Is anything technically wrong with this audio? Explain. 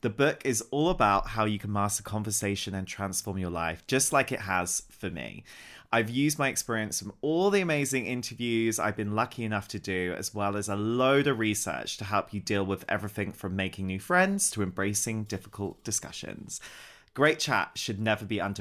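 No, nothing technical stands out here; the speech comes through without any audible faults.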